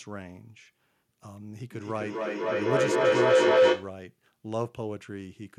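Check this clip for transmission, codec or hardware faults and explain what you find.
There's one fault: feedback howl from 1.72 to 4.0 s. Two devices sharing a room let the speech loop mic-to-speaker with net gain, so it narrows to a tone around 500 Hz, pulsing roughly every 0.3 s and peaking about 13 dB above the speech.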